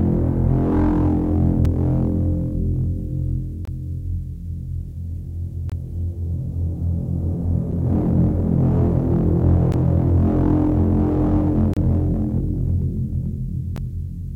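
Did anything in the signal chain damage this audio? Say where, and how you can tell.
Yes: a gap between stream segments at the streaming playback stage, with hard-edged silences at 1.65, 3.65–3.68, 5.70–5.72, 7.72, 9.72, 11.74–11.77 and 13.76 s, about every 2 s. Each hole lasts from about 4 to 31 ms. Mismatched segment timestamps insert silence. Nothing is lost: the sound resumes exactly where it stopped, unlike a dropout.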